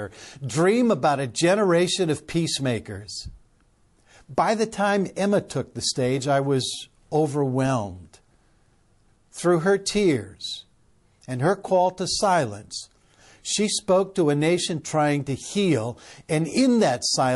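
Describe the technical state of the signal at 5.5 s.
Right at 5.5 s there's pre-echo. From about 5.48 to 5.50 s, just before "the stage I was", a hiss rises about 11 dB over the quiet gap and leads into the onset, which sounds a bit soft and smeared. The codec spread quantisation noise sized for the loud attack across its whole transform block, so roughly 24 ms of it leaks ahead. That spread fits a long block of around 48 ms with no switch to short blocks for the transient.

Underneath that, the speech has a watery, swirly quality with metallic edges on the sibilants. Those are plainly audible artefacts of MP3 compression, likely at a low bitrate around 48 kbps. With that few bits, the encoder lets weaker frequency lines drop in and out from frame to frame. That flicker is what gives the sound its swirl.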